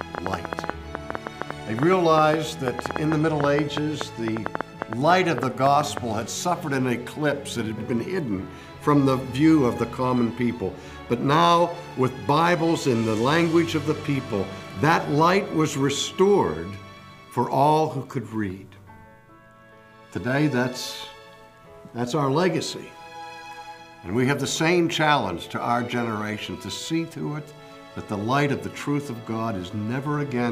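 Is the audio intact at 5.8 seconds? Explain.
No. At 5.8 seconds the audio is still under a train of clicks running from 0.01 to 5.98 s. Sharp pulses of much the same shape land about 7.4 times per second at an uneven pace. That makes around fifty in all, peaking roughly 15 dB above the underlying sound. They come across as a ragged ticking and popping over everything, gaps included. The likely source is electrical interference or a faulty connection or power supply.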